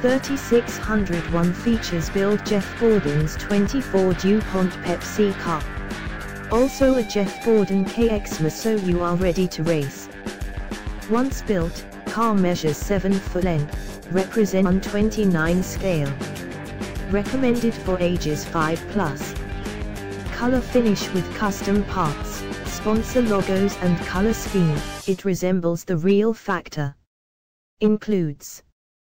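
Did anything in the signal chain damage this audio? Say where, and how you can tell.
Yes. At about 14.65 s there's a quick smeared blip, and the sound jumps ahead rather than clicking. That points to compressed frames skipped at the codec or storage end: the decoder dropped a run of frames, either missing or rejected as corrupt. The jump looks like roughly 0.4 s, around fifteen frames, which fits frame lengths of about 26 ms. The overlap between neighbouring frames softens the join into that brief blur.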